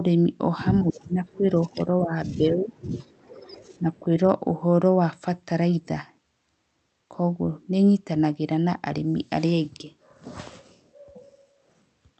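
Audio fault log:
0.82–2.75 s, speech suppressed in double talk: the speech sinks by up to roughly 20 dB in broken patches adding up to about 1.5 s. This is likely an echo canceller that could not tell the near talker from the far-end echo during overlapping talk and pulled both down. On a waveform the envelope caves in repeatedly.
3.07–3.38 s, echo leak: a faint delayed copy of the speech, about 40 dB below the direct sound and lagging it by 0.23 s, slips through. This is likely loudspeaker pickup that the canceller left unremoved. It is barely visible on the waveform, but the spectrogram repeats the speech's harmonic pattern as a pale shadow shifted a quarter-second later.
3.72–3.78 s, echo leak: another brief scrap of the same echo appears at the same 0.23 s lag and about 40 dB down, lasting only 60 ms. On the spectrogram it is a short, weak smear trailing the speech.
3.79–4.27 s, speech suppressed in double talk: a shallower dip of up to roughly 10 dB lasts about 0.3 s in total. 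The waveform shows the envelope briefly pinched.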